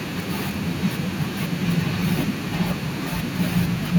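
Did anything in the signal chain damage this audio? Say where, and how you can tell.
No, nothing in the signal chain damaged this audio.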